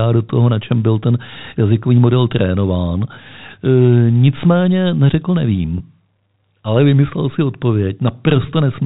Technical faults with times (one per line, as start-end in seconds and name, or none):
5.78-5.80 packet loss with pitch repetition